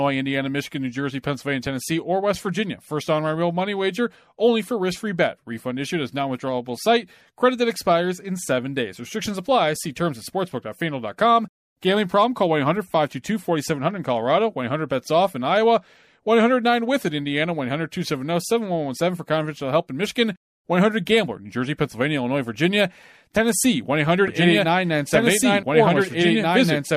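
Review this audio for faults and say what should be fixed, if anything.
From 24.28 s to the end, a doubled audio track appears: a second, full-band copy of the speech enters abruptly, trailing the original by roughly two seconds at about the same level, so earlier phrases overlap later ones. Unlike an echo or reverb tail, it has no decay, no room colouring and no repeats. The likely cause is a second capture path or an edit layering two copies. To prevent it, route only one source into the mix and check edits for stacked duplicate regions.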